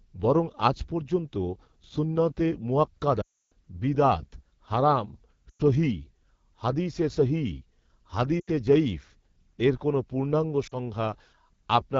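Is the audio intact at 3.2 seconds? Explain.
No. From 3.21 to 3.52 s there are lost AMR speech frames. After the checksum failures, the decoder repeats the last pitch and vocal tract settings with falling gain, so the sound smears briefly and fades to silence within this 0.3 s span, which fits about 15 dropped 20 ms frames. The whole clip also carries the AMR wideband (HD Voice) codec. Its rough, raspy texture points to one of the lowest rates, likely 8.85 kbit/s.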